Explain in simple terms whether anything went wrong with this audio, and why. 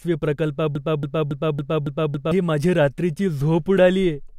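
From 0.75 to 2.32 s the speech sticks in a broken-record loop. The same 0.28-second piece plays six times, likely from a stalled player. It resumes at "माझी रात्रीची".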